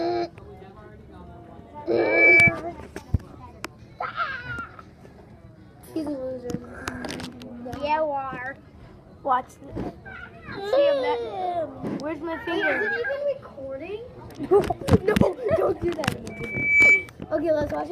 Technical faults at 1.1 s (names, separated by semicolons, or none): none